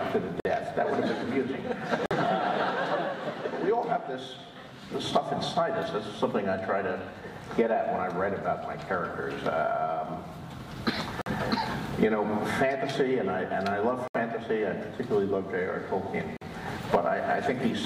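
Five brief dropouts to silence interrupt the audio at 0.40, 2.06, 11.21, 14.08 and 16.37 s, each about 50 ms (the fourth about 70 ms), likely Bluetooth stalls from a momentarily starved receiver buffer.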